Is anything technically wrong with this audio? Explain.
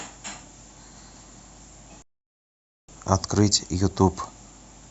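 Yes. At 2.02 s the speech hits a rebuffering stall: playback exhausted its downloaded audio and waited for more data. The sound drops to silence until 2.89 s, then picks up exactly where it stopped, losing nothing but adding about 0.86 s of dead air.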